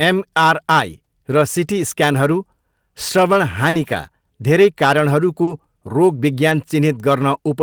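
At 3.69 s a short concealed packet loss leaves a hole of about 40 ms in the speech. Nothing arrived for that stretch, so the receiver extended the preceding sound, carrying on its pitch where it was voiced and shaped noise where it was not, before fading back into real audio. It is heard as a brief smear or wobble. Overlapping its tail, from 3.73 to 3.83 s, is a lost packet rebuilt from error correction. For about 60 ms, which fits three 20 ms frames, the decoder played the low-bitrate copies carried in the following packets. There is no gap, but this span sounds rougher and noisier. The same pairing returns later. A concealed loss from 5.43 to 5.49 s produces another roughly 40 ms smear. It runs into an FEC-rebuilt stretch from 5.47 to 5.53 s that lasts about 40 ms and has the same grainy texture. At 6.49 s a single rebuilt frame of about 20 ms gives a brief rough patch without any dropout.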